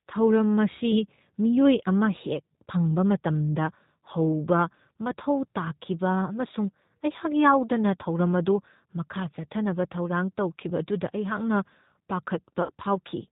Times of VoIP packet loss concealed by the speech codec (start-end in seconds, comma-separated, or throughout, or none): 12.63-12.73